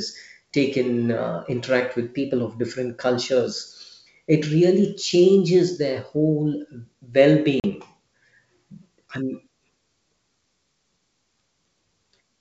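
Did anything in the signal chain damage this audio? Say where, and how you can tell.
Yes. Packet loss on an ADPCM call damaged it at the network stage. At 7.60 s a hard-edged 40 ms silence cuts into the speech, which fits about two lost packets. When sound resumes at 7.67 s, the G.722 decoder's predictor and step size no longer match the sender's.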